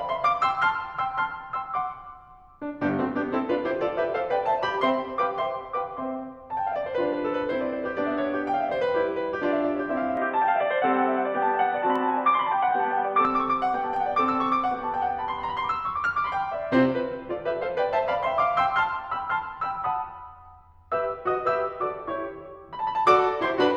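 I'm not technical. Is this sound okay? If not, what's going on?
No. From 10.17 to 13.25 s the music turns dull and boxy. The likely cause is an input switched to a poorer device. Sharp single clicks at 11.96 and 13.96 s are likely dropped samples, where a few samples go missing and the waveform jumps.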